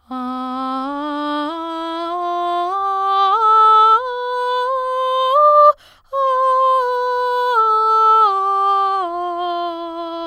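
A music clip, and nothing is technically wrong with it.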